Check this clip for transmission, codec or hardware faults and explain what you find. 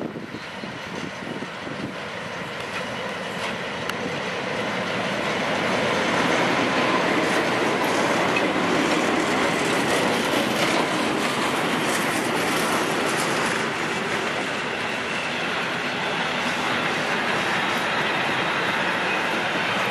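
Nothing stood out on listening to this clip.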